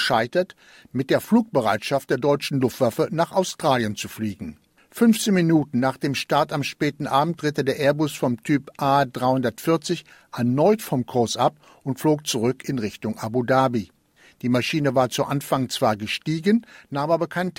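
No technical faults can be heard in this speech recording.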